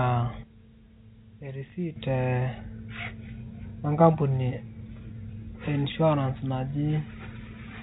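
Speech over a telephone-band line, with nothing above about 3.8 kHz, which fits G.711 coding. At 0.43 s the level drops by about 12 dB in a single step, and the background noise falls with it, so it's a sudden gain jump rather than the talker moving. That's likely a gain setting or bit shift applied with no ramp. It stays down until 1.96 s, where it snaps back up just as abruptly. Separately, there are two brief scrambled moments, at 1.68 to 1.72 s and at 5.9 to 5.94 s, where the chunks play out of order. In each one a 20 ms piece of audio turns up one chunk late, after the piece that should have followed it. Nothing goes missing, but the sequence is wrong, so you hear a tiny jumbled stutter. The first one falls inside the quiet stretch, just before the gain comes back.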